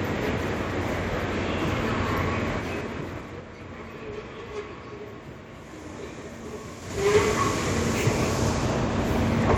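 From 2.51 to 3.44 s, zipper noise: the level falls roughly 15 dB in unsmoothed 3 dB steps, about five per second, each jump ticking audibly. The waveform envelope shows a staircase; the spectrogram shows faint vertical broadband lines at each step.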